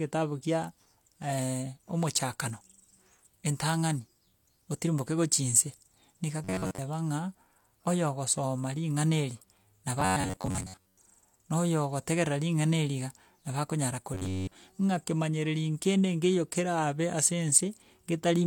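Robotic sound from repeated short buffers at 6.44 to 6.80 s, 10.01 to 11.00 s and 14.14 to 14.55 s. The speech becomes a rigid metallic buzz near 94 Hz. Audio is likely arriving too seldom, so a roughly 11 ms chunk is replayed through most of each stretch.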